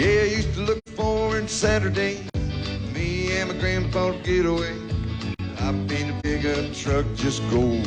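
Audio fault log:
0.78–0.89 s and 6.20–6.26 s, AAC frame loss with muting: the spectrum drops to nothing for about 85 ms, then 43 ms, which fits two lost frames and then one. Overlapping windows taper the edges, so the waveform fades smoothly in and out around each hole and the spectrogram shows a soft-edged blank column.
2.30–2.34 s and 5.34–5.39 s, gap between chunks: a 48 ms silence with abrupt edges recurs 3 s apart at chunk joins. The waveform drops to a flat line, and the spectrogram shows a sharp-sided empty stripe.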